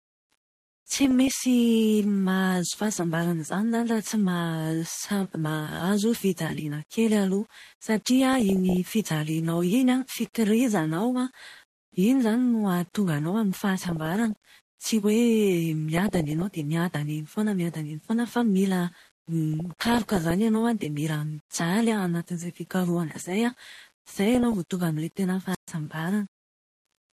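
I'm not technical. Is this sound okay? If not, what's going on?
No. Four separate problems can be heard in this speech recording.

Low bit depth without dither runs through the whole clip. The voice has a fine, gritty roughness that follows it, and the quietest parts break up into crackle. This is likely because the sound was stored with very few steps of loudness, around 8 bits, and each value was simply rounded. The rounding error rides along with the voice instead of sitting underneath it as a smooth hiss.

MP2 compression is also present from start to finish and is plainly audible. The speech sounds dull, with a gurgling, grainy edge. This format likely split the sound into narrow frequency bands and had to save data. It switches some of the upper bands off and stores the rest coarsely, so the brightness comes and goes and the tone turns muddy.

DAB burbling appears six times: 0.92 to 1.42 s, 8.08 to 8.77 s, 13.84 to 14.50 s, 15.96 to 16.42 s, 19.54 to 20.31 s, and 24.35 to 24.71 s. 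Each time there are short blips of noise laid over the voice. Weak digital radio reception lets corrupted data through, putting those blips into individual frequency bands.

Wireless microphone squelch dropout comes at 25.51 to 25.69 s. There is a brief swell of hiss, then the sound cuts to near silence for about 0.13 s before the voice returns. The radio link from the microphone weakened, and the receiver muted itself to avoid passing on loud static.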